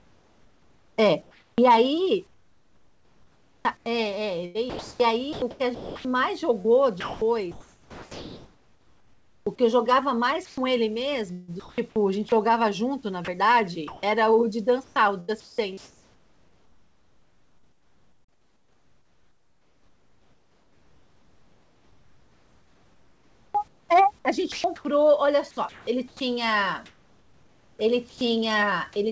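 From 0 to 9.46 s, 10.45 to 12.32 s, 13.25 to 14.03 s and 14.84 to 28.21 s, the speech is chopped by the voice detector. The sender likely stopped transmitting during quiet passages and substituted comfort noise: about 5.9 s, 0.48 s, 0.18 s and 10 s respectively. Word edges drop away. A waveform shows flat, even-textured patches, and a spectrogram shows smooth noise bands, capped at 8 kHz by the G.722 call path, replacing speech detail.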